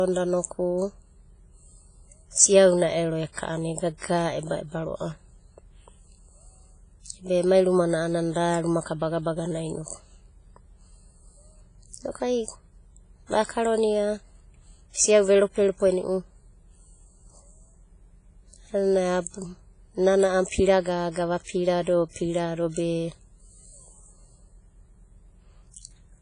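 From start to end, the speech carries heavy WMA compression damage: ringing, washy smearing and breathing hiss. Nothing sounds above 10.5 kHz, likely from a low-bitrate WMA encoder.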